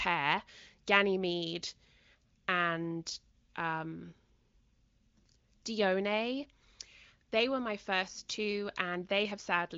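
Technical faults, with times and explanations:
No technical faults are audible; the speech carries the band-limited character of the AMR wideband (HD Voice) codec, with nothing above about 7.5 kHz and any coding texture faint at most, which points to one of its higher rates.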